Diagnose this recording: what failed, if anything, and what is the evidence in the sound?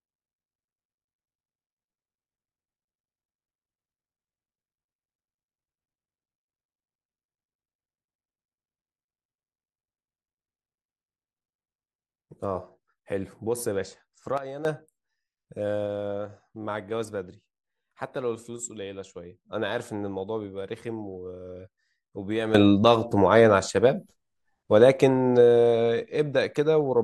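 Speech and background step down together by about 11 dB from 14.38 to 14.65 s, then up about 12 dB from 22.55 s onward. These are sudden gain jumps, likely from digital gain changes applied without a ramp.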